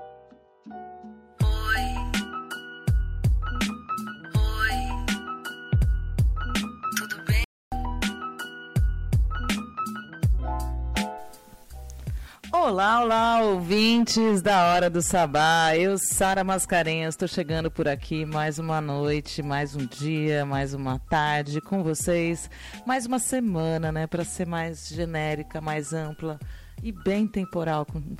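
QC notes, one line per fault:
7.44–7.72 s, playback stall: the sound halts mid-flow into about 0.28 s of silence, likely from the player starving for data, longer than a brief dropout gap.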